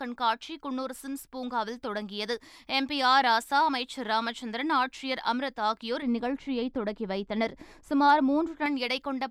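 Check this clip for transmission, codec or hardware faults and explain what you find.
One fault stands out. From 6.02 to 8.66 s, de-emphasis applied wrongly: a treble cut with no matching pre-emphasis tilts the speech down about 11 dB at 10 kHz, sounding dull and muffled. The smooth slope, not a sharp cutoff, separates it from low-pass filtering.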